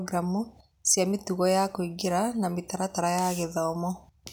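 Nothing technically wrong turns up anywhere in this short piece of speech, so there's really nothing to flag here.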